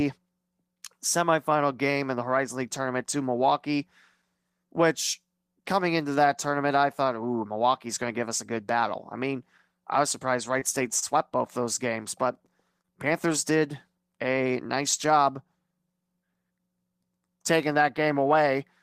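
The speech in this clip has three brief packet-delivery faults in about two seconds. Twice, a short concealed packet loss occurs: a 20 ms slice of the call never reached the decoder, so the receiver invented replacement sound by extending what came before, then blended back into the real signal. At 10.59 to 10.63 s about 19 ms of synthetic fill covers the hole, and at 12.82 to 12.87 s about 16 ms does, adding a little extra time there. Each is heard as a momentary smear or wobble, with a quick consonant possibly swallowed. Between them, at 10.99 to 11.04 s, comes a short stall from a late packet. The packet arrived behind schedule, the jitter buffer emptied, and the receiver stretched the current sound by 28 ms until it could resume from the same point. Nothing is lost, but the sound lingers slightly too long with a faint buzz or dip, and everything after it plays 28 ms later.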